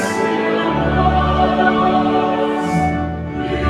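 From start to finish there's a noise suppressor applied to music or sounds that it wasn't built for. A speech-oriented suppressor treats sustained tones, room ambience and reverb tails as noise and pulls them down, so the level keeps dipping and recovering by something like 5 dB. Onsets punch through fine, but anything held sags right after, which gives the whole clip a pumping, fluttery feel and a thinner body than it should have.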